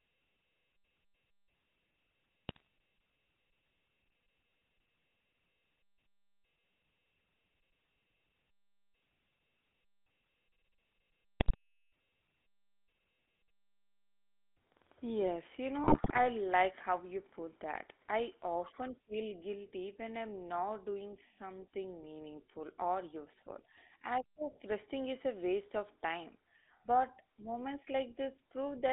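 From start to finish the speech has a buzzy, gravelly roughness inside a narrow band of about 300 Hz to 3.6 kHz. This is the GSM full-rate codec, which fits a 13 kbps stream. It rebuilds the voice from a vocal-tract model driven by coarsely spaced excitation pulses, and the damage is plainly audible.

At 2.49 to 2.62 s, 11.40 to 11.55 s and 15.84 to 16.20 s, the voice breaks into squawks, pops and gargling. These are GSM bit errors. Corrupted filter, pitch and gain values reached the decoder, bending the spectrum and throwing the level off frame by frame. The last burst is the longest.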